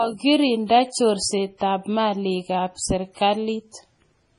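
A speech recording that was likely passed through a low-bitrate MP3 encoder and then saved again as a high-bitrate MP3 carries the damage of the first pass throughout. The audio has nothing above about 10.6 kHz, so sibilants and breath lack their top edge and the speech sounds dull. The smearing and swirl of heavy compression remain, a band limit that fits an encode near 24 kbit/s. The larger second encode cannot restore any of it.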